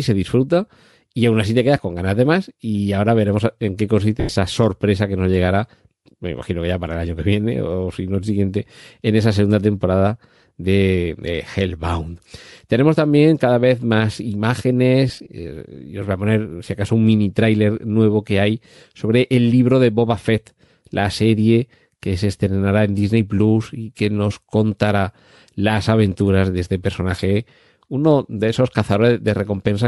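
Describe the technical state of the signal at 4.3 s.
At 4.3 s the signal is inside a burst of lost LE Audio frames, running from 4.20 to 4.36 s. About 130 ms of audio goes missing, scattered over 160 ms. The longest gap lasts about a tenth of a second. The decoder covers each gap by repeating the last spectrum with scrambled phase. The speech smears into a noisy, hissing wash. Across the longest gap that wash fades toward silence before the sound returns.

Under this, the whole clip carries a breathy, grainy edge with a thinned, noise-filled top end. That is likely Bluetooth LC3 compression. The damage is plainly audible. The coarse treble and the frame-sized smearing fit LC3 running at around 48 kbps with 10 ms frames. At that rate much of the upper spectrum is coded as filler noise instead of real detail.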